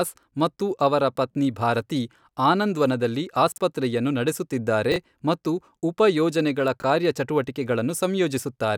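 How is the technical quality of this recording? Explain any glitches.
Three brief glitches disrupt the speech. Chunks out of order occur at 3.52 to 3.58 s, after "ಅವರ ಪತ್ನಿ ಭಾರತಿ ಆನಂದ್ವನದಲ್ಲಿ"; at 4.92 to 4.96 s, just before "ಮತ್ತು ಉಪ ಯೋಜನೆಗಳ"; and at 6.80 to 6.84 s, after that phrase. In each case a short piece arrived late and played after the material meant to follow it, which fits 20 ms chunks displaced by one or two positions. Nothing is missing, but each span sounds jumbled.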